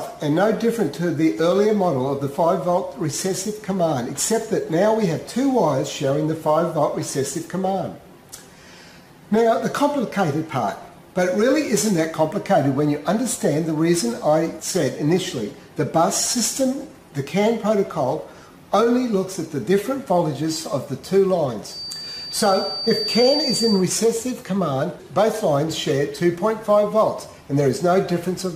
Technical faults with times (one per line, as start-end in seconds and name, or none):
21.64-23.87 feedback whistle